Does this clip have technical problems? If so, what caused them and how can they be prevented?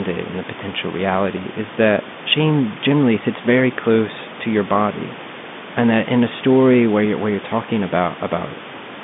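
No, this clip has no technical problems, so there is nothing to prevent.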